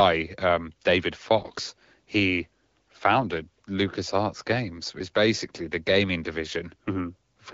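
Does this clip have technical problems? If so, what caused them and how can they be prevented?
Yes. From 1.38 to 1.53 s, AMR bit errors flip roughly one bit in twenty in the weakly protected part of the AMR-WB frames, which fits about eight 20 ms frames, while the checksum still passes. The excitation pulses, gains and spectral detail decode wrongly, so for about 150 ms the speech turns hoarse, scratchy and gargly while keeping its pitch and level. Stronger channel coding or a lower, more robust codec mode on weak radio links would prevent it.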